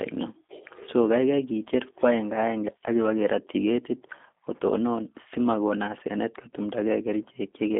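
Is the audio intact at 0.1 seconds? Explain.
No. At 0.1 s, and across the whole clip, the speech carries G.729 codec damage. It has been rebuilt from a vocal tract filter, a pitch predictor and a few pulses per frame, so it sounds rough and slightly synthetic, which fits an 8 kbit/s G.729-type codec. The band runs from 250 Hz to 3.6 kHz. On a spectrogram, energy stops sharply at about 3.7 kHz with a thin floor below 250 Hz, and harmonics look smeared and blocky.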